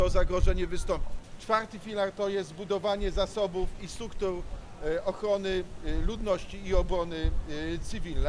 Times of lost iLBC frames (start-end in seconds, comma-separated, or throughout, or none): none